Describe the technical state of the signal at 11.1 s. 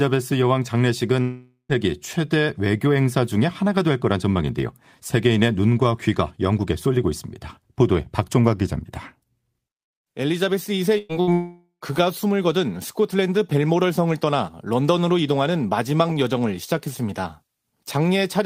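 At 11.1 s there is a burst of packet loss, from 10.98 to 11.12 s. About 120 ms of speech was lost or came too late to be played. The receiver stretched the last sound into a fading buzz or hiss, then resumed further on.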